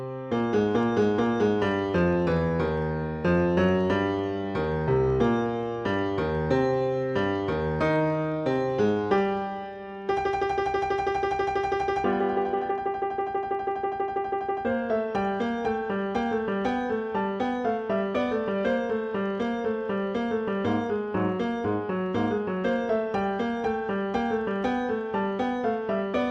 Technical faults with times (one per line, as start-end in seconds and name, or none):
0.11-26.29 clock slip clicks